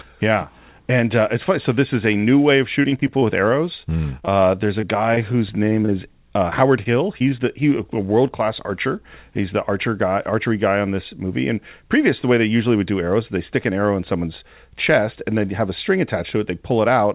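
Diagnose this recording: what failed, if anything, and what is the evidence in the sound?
Repeated packet loss (robotic sound) on the network side: from 2.82 to 3.23 s, just after "a new way of", five gaps lose about 80 ms, the longest 20 ms. From 3.97 to 5.9 s, nine gaps lose 120 ms, up to 28 ms each. Each hole is patched by extending the last pitch period, so the sound turns choppy in clustered runs. Steady codec noise would not cluster like this.

A jitter buffer slow-down runs from 3.11 to 4.30 s, overlapping the loss. The receiver repeated pitch periods and pause fragments to rebuild its reserve, adding 50 ms and playing at 96% speed. The pitch stays put, which separates this from a clock or sample-rate mismatch, where the pitch would drop along with the speed.

Short concealed packet loss hits at 6.50 s, 6.83 s and 7.19 to 7.31 s. The last comes just before "the he" and adds roughly 20 ms. 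Each is a single 20 ms packet filled from the preceding sound and crossfaded back, heard as a brief smear or wobble. These are isolated events, not the sustained robotic runs earlier, all within the 4 kHz band of the G.711 call path.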